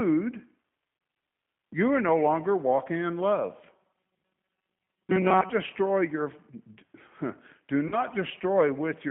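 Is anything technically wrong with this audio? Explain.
Yes. Throughout, the speech is carried by the G.729 codec at 8 kbit/s. Its filter-and-pulse rebuild sounds plainly rough and synthetic, and a spectrogram shows nothing outside roughly 150 Hz to 3.5 kHz.

At 0.97 and again at 7.88 to 8.02 s, there is VoIP packet loss concealed by the speech codec. Each gap covers about 40 ms, which fits two lost packets. The decoder stretches its last frame into a fading buzzy tone or coloured noise, and the waveform shows a smooth, decaying tail.

From 3.73 to 5.50 s, between "longer walking in love" and "destroy your", there is robotic sound from repeated short buffers. The sound turns metallic, with a rigid 188 Hz buzz, because most of the audio is replaced by looped snippets. This is likely caused by repeating a buffer of about 5 ms. A spectrogram shows evenly spaced horizontal harmonic lines.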